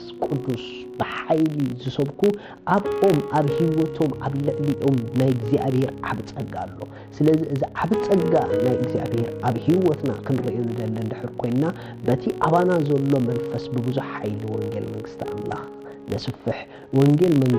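A steady 50 Hz buzz runs through the whole sound, the signature of a filter restarted on every block. It forgets its state at each boundary, so every 20 ms block opens with a small transient. The spectrogram shows vertical striations and stacked harmonics at multiples of 50 Hz. The waveform shows regular ticks whose size tracks the signal's level.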